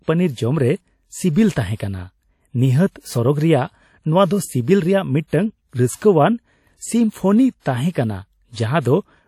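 A low-bitrate transform codec, likely WMA compression at something near 48 kbps, runs through the whole speech clip. Its long blocks spread quantisation noise and drop weak spectral lines, so the audio rings and sounds washy, with a hiss that breathes along with the speech and nothing above 18 kHz.

From 7.60 to 7.65 s comes a pre-echo. A sharp attack lands late in a coding block, and the noise sized for that loud moment also fills the quiet stretch before it. The result is about 55 ms of hiss ahead of the onset, which sounds softened and smeared.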